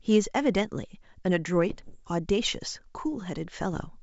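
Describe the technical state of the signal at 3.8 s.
Bits are being flipped on the ADPCM link carrying this G.722 call, at an error rate of about 0.7 percent, from 3.72 to 3.83 s, a span that fits a handful of damaged frames. Each wrong bit throws off the decoder's step size and predictor, so the error keeps ringing for a few milliseconds instead of staying a single sample. Around 3.8 s the speech breaks into pops and rough, gritty bursts with brief jumps in level.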